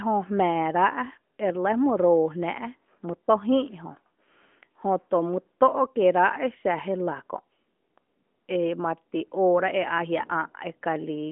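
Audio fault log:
No fault is logged for this speech clip.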